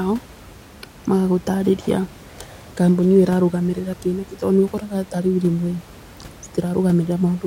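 No technical faults can be heard in this recording.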